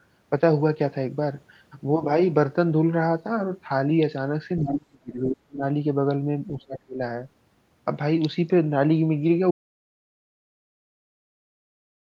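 From 4.59 to 5.62 s, and again from 6.49 to 7.0 s, an echo canceller likely mistook this side's talk, overlapping the far end, for its own loudspeaker echo and clamped the line, producing speech suppressed in double talk. The talker's level sinks sharply, by about 35 dB at the deepest point of the first stretch and about 30 dB in the second. The voice thins and drops out in fragments for roughly a second, then for a little under half a second.

At 9.51 s the input signal was likely lost while recording continued, giving an audio dropout to silence. The sound stops mid-flow and never returns. The gap is silent with no room tone underneath, and it runs to the end of the clip, so whatever followed is missing.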